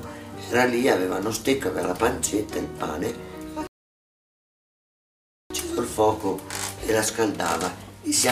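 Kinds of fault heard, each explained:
Rebuffering stall: from 3.67 to 5.50 s the audio drops into silence because playback exhausted its downloaded data and waited for more, then picks up at exactly the point where it halted, so nothing is skipped but about 1.83 s of dead time is inserted.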